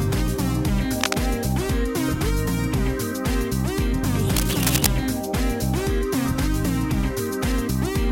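It's a short piece of audio with two bursts of cable scratch noise, at 1.01 to 1.16 s and again at 4.29 to 4.88 s. The first sits about level with the sound, the second a little below it. That dense, uneven crackle is likely a worn cable, connector or control being moved.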